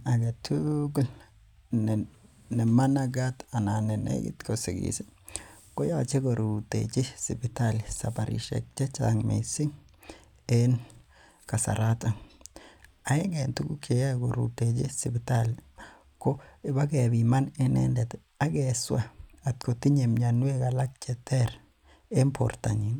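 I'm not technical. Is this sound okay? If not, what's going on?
Yes, this speech recording sounds fine, and nothing in it points to a technical problem. There's nothing here that needs fixing.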